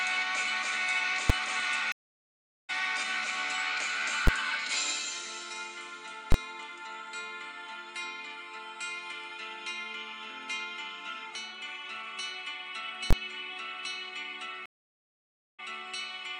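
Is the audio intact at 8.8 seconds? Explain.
Yes, the audio at 8.8 seconds is intact, with no dropout, click, distortion or other fault audible at that moment.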